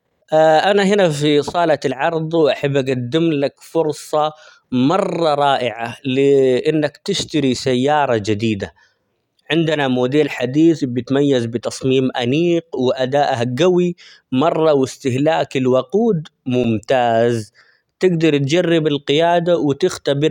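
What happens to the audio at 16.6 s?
A repeated buffer occurs at 16.64 s. New audio arrived late, so the playback device replayed its last short chunk, about 5 ms long, twice more, with little or nothing of the speech lost. Those rapid hard-joined repeats are heard as a brief click or buzz.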